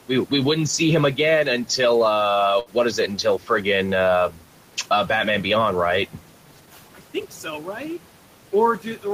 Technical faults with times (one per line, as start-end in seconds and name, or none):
0.00-9.14 noise suppressor artifacts
2.59-2.69 burst of packet loss
3.38-3.65 speech cut by the noise suppressor